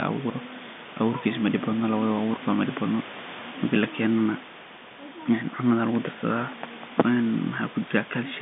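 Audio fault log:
No faults heard; telephone band, room noise about 14 dB below the speech.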